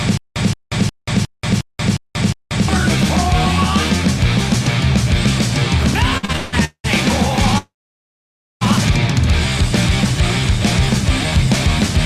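From the very start to 2.68 s there is a stutter with silent gaps: a 174 ms burst returns every 358 ms with about 184 ms of digital silence between, seven times. A stalled stream replaying its last fragment is the likely cause, and the skipped audio is lost. At 5.79 to 5.94 s a brief loose connector crackle bursts out as irregular scratching, unlike the steady, even pacing of a stutter. From 6.17 to 6.86 s come repeated stalls (stutter): five gaps, the longest 194 ms, are bridged by continuing the last sound rather than silence, so the audio drags but nothing goes missing. From 7.58 to 8.63 s a call audio freeze holds for about 1.03 s, with the continued sound fading into roughly 0.91 s of silence before the audio resumes where it stopped. Unlike the opening stutter, nothing repeats and nothing is lost. Packets held up in transit are the likely cause.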